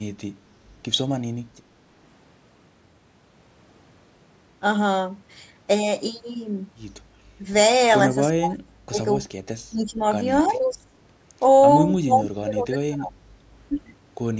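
The echo canceller most likely could not separate the near talker from loudspeaker echo during double talk, so it turned the talker down: speech suppressed in double talk. The voice dips slightly at 7.40 to 7.44 s, drops deeply from 8.36 to 8.99 s, and sinks moderately from 9.70 to 10.03 s. At 10.42 to 10.74 s, an echo leak, likely from a loudspeaker on the far end, sends back a faint copy of the speech about 30 dB down and delayed by 347 ms. Suppression cuts in again from 10.48 to 10.93 s and, heavily, from 12.05 to 13.25 s.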